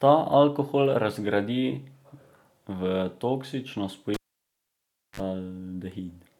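Speech with a cable pulled and plugged in from 4.14 to 5.2 s: a pop, 1.01 s near-silence, then 43 ms of 50 Hz buzz and a second pop, unlike a clean dropout.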